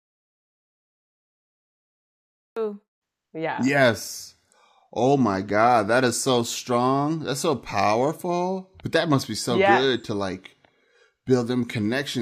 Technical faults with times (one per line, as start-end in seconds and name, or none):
0.00-2.56 audio dropout to silence